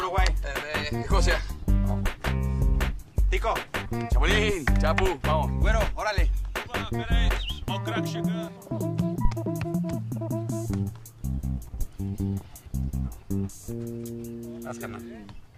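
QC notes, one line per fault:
9.25–9.32 s, phantom power thump: a deep low-frequency thump peaking at about -10 dBFS and dying away within roughly 15 ms. A supply switched on a live input sends a DC step through the coupling capacitors, which the input passes as one short electrical pulse.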